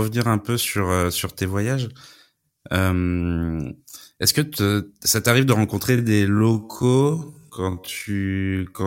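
From 5.87 s to the end of the clip, right after "ça t'arrive de", the speech suddenly slows to roughly half pace (0.509 times normal speed) in a time-stretched section. The pitch does not drop as it would with a slowed playback rate, which is what separates this from a simple speed change. The likely cause is software lengthening the audio by repeating short slices, which leaves the slowed speech dragging rather than deeper.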